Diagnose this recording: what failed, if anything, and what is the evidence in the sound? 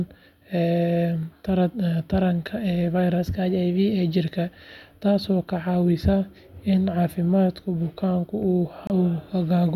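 From 3.18 to 4.22 s the speech runs 5.4% fast and about 91 cents sharp, then snaps back. Harmonics step up on the spectrogram. This is likely a drift correction step in the buffer's clock matching.

At 8.87 s a 27 ms silence appears as a flat gap in the waveform and a blank column on the spectrogram. This is likely a Bluetooth stall, where the headphone buffer ran dry.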